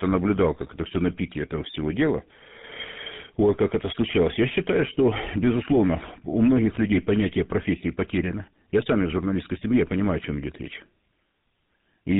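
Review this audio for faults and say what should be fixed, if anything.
Tandem speech coding runs through the whole recording. The speech passed through GSM full rate twice, with G.711 between. The second GSM coder worked on the first one's degraded output. The result is rough, muffled and warbly, with nothing above 3.8 kHz. To prevent it, keep the call in one codec end to end, or use transcoder-free operation across the link.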